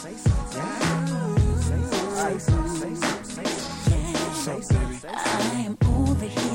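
No technical faults are audible anywhere in the sound.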